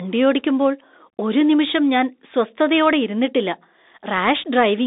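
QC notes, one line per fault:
Throughout: Bluetooth CVSD headset codec. The speech sits in a narrow line band of roughly 250 Hz to 3.7 kHz, with nothing above 3.8 kHz. The damage is plainly audible. CVSD encodes each sample as a single up-or-down bit with an adapting step size, which fits a 64 kbps stream. Loud, fast-rising high content outruns that step and distorts, so s sounds turn scratchy, and a granular hiss runs beneath the speech.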